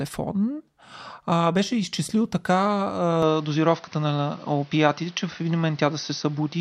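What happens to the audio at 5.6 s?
At 5.6 s the speech is duller and boxier than at the start. This change begins at 3.22 s and lasts to the end of the clip. Nothing is heard above 6.3 kHz, and a faint new background noise sits about 30 dB below the speech. The loudness stays about the same, and there is no gap at the change. The likely cause is an input switched to a poorer device, one with a narrower band and its own noise.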